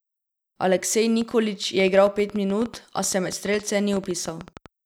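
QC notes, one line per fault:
1.22 to 4.67 s: train of clicks. From just after the first second to almost the end of the speech, a run of sharp ticks sits on top of everything, about 8 per second but spaced unevenly, roughly thirty in all. They're all much the same shape and poke up a bit above the speech level, so you hear them in the gaps too. That pattern most likely comes from interference from nearby gear or a faulty connection or power supply injecting pulses.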